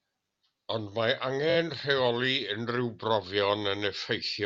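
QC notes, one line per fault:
1.49–1.56 s, repeated frames: one short block of compressed audio, about 21.3 ms long and consistent with a single codec frame, was delivered three extra times. The decoder replays it, so the speech stutters briefly and runs 64 ms longer.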